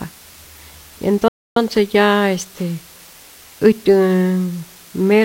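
From the start, low bit depth with dither adds a constant, even hiss about 25 dB below the speech, consistent with around 7 bits, visible as a flat, uniform noise floor across all frequencies. From 1.28 to 1.56 s, a playback stall cuts the speech mid-flow for about 280 ms, likely from the player running short of data or being blocked, showing as a blank vertical gap in both views.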